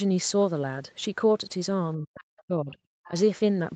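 A short speech recording from a call, with nothing above 8 kHz, which fits the call's wideband codec. Between 1.96 and 2.76 s the talker's voice sinks by up to around 40 dB for most of that stretch, the speech suppressed in double talk that likely comes from an echo canceller turning everything down while both sides spoke. From 3.04 to 3.2 s a faint second voice, well below the talker, comes through: the other side's voice leaking through, likely loudspeaker echo the canceller did not fully remove.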